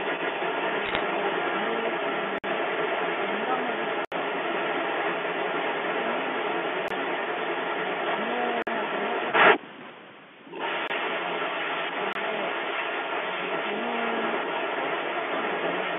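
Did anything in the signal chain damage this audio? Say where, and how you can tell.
Yes. Echo leak in call processing: a delayed copy of the speech runs from 0 to 9.6 s at 258 ms, then from 10.4 s at 156 ms, about 5 dB louder than the speech. An echo canceller likely let it through.

Bit errors on a digital phone line, at the network stage: sharp ticks and crackle cluster between 0.86 and 1.01 s. Flipped bits corrupt single G.711 samples.

Blocks of digital silence, at the driver or buffer stage: hard dropouts occur at 2.38, 4.05, 6.88, 8.62, 10.88 and 12.13 s. They last 23 to 70 ms. The 23 and 46 ms gaps fit 1024- and 2048-sample buffers.

Speech suppressed in double talk, in call processing: from 9.67 to 10.51 s the talker drops steeply, by up to about 40 dB. This is likely the echo canceller ducking during overlapping speech.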